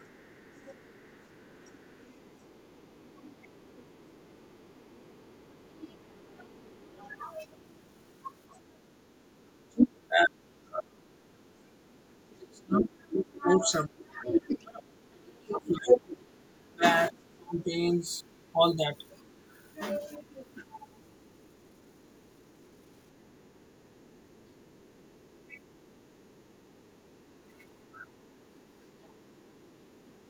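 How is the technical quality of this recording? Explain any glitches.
The recording has clear echo-control problems: the talker is repeatedly turned down, and the other end of the call bleeds into the microphone.

Speech suppressed in double talk occurs at 0.0–0.35 s, 2.76–3.21 s, 5.31–6.49 s, 9.68–20.62 s and from 29.14 s to the end. The likely cause is an echo canceller that could not separate the local talker from the loudspeaker echo while both sides spoke, so it attenuated everything. Brief dips of roughly 10–20 dB punch holes in the voice, and the long 9.68–20.62 s stretch loses several seconds in total, with drops near 30 dB.

The other side's voice leaking through is heard from 0.0 to 9.86 s and from 18.26 to 29.99 s as a faint second voice far below the talker. From 12.34 to 16.5 s it rises to roughly the same level as the talker. This is likely residual loudspeaker pickup that the canceller failed to subtract from the microphone signal, leaving a competing voice in the recording.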